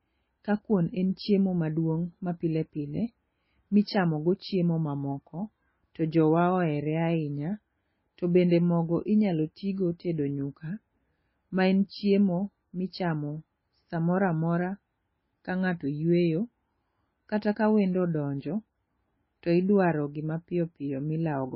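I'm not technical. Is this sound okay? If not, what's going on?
No. Throughout the speech, nothing is heard above about 5.6 kHz, so it sounds muffled. This is likely low-bitrate audio saved at a high bitrate: a heavily squeezed MP3 re-saved as a large MP3, which cannot restore the detail already lost.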